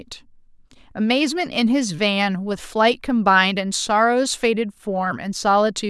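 No technical faults are audible.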